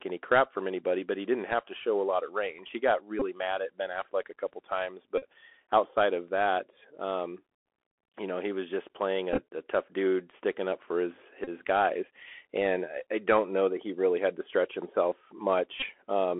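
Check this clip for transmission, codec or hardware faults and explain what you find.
Two faults are present: the whole clip passes through a Bluetooth CVSD headset codec, and five short bursts of Bluetooth headset packet repetition interrupt it.

Throughout, the speech has been carried as a one-bit delta stream, which fits the 64 kbps CVSD headset link, squeezed into a 300 Hz to 3.4 kHz line band. The adaptive step cannot keep up with fast, bright sounds, so sibilants turn scratchy, loud peaks distort, and a granular hiss sits plainly under the voice.

Packet repeats occur at 3.20 to 3.23 s, at 5.18 to 5.27 s between "a couple times" and "outside of that um", at 9.33 to 9.42 s after "he was just playing", at 11.44 to 11.49 s between "sticking up for his" and "guys and i don't", and at 15.80 to 15.85 s. Lost packets were filled by replaying the previous one. At a repeat every 3.75 ms, each run produces a brief buzz near 267 Hz. 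At 9.33 s the losses are scattered across about 60 ms in runs of only a few milliseconds, so that event gives small ticks rather than a steady buzz.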